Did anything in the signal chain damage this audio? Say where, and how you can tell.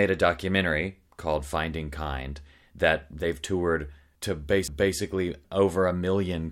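Yes. A CD skip in playback at 4.68 s, just after "that they've toured to". A tick and a very brief mute, well under 10 ms, are heard. The speech then resumes from a different point, because a knock or disc flaw threw the laser onto another turn of the spiral.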